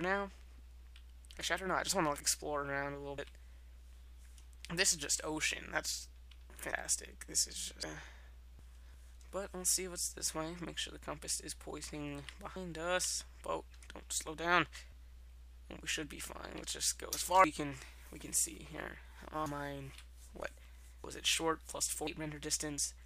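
No faults can be heard anywhere in the recording.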